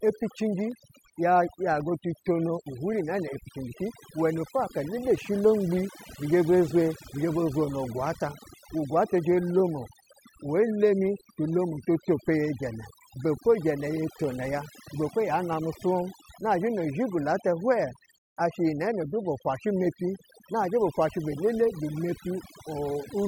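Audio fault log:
throughout, overdone noise removal: the denoiser's pushed way too hard, so the gaps sink to near silence with twinkly specks.
0.72, 1.80, 9.18, 14.24, 15.53, dropped samples: single sharp clicks, likely from a tiny fraction of a millisecond going missing so the waveform jumps straight to a later value.
18.18 to 18.37, rebuffering stall: playback cuts to silence for about 184 ms, then picks up exactly where it left off, since the player just ran dry.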